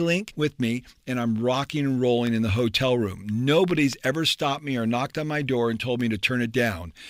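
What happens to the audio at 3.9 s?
Between 3.71 and 3.95 s, just after "in the hotel room", a loud pop strikes twice in quick succession, peaking about 10 dB above the speech. It is likely a brief voltage pulse from a plug, switch or static. Unlike a dropout, the speech continues underneath.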